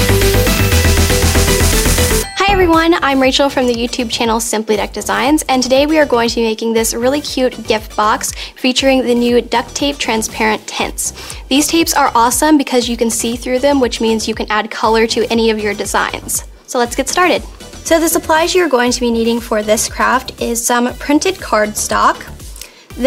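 No technical faults are audible.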